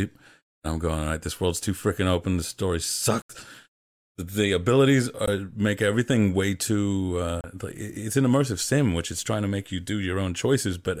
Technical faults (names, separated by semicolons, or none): Bluetooth dropout